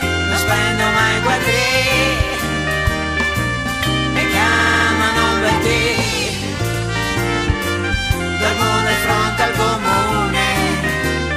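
Repeated frames at 4.52, 6.73 and 9.92 s replay a 70 ms block (five extra times at 4.52; 40 ms at 9.92), heard as a stutter. The waveform shows identical copied slices.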